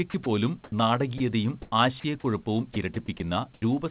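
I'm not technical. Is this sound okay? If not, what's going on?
No. At 0.1 to 0.26 s, 2.0 to 2.24 s and 2.74 to 3.2 s the speech turns choppy, with bits of it swapped for a flat hiss. This is sound chopped by the voice detector, likely caused by the call's speech detector flicking on and off and filling the gaps with fake noise.

From 0.64 to 0.72 s and again from 1.62 to 1.72 s, the background briefly turns into a smooth, featureless hiss. The second time the change in level is much bigger than the first. This is comfort noise in place of the background: the sending side likely stopped sending during a pause and the receiver made up noise to fill it.

At about 0.7 s the speech starts abruptly, as if its first instant were missing. This is an onset clipped by the voice detector, likely because the detector noticed the speech a moment late, so the opening sliver was never sent.

At 1.18 s and again from 3.54 to 3.62 s a bit of speech vanishes into steady hiss and then comes back. 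This is sound dropped by the voice detector: it likely mistook part of the speech for background and briefly stopped sending.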